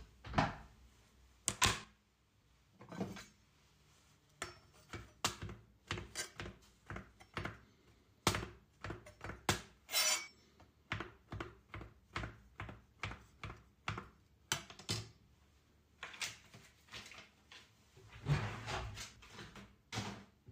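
Small forward jumps, skipping roughly 20 to 70 ms each, at 0.38, 1.84, 10.28, 17.18, 18.32 and 19.16 s: likely dropped buffers (overrun), with unread audio overwritten.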